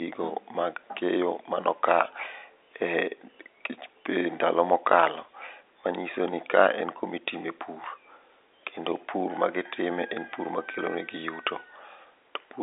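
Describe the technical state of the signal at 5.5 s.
At 5.5 s the signal is intact, with the G.711 telephone coding narrowing the speech to the usual line band and cutting everything above about 3.8 kHz, as it does throughout.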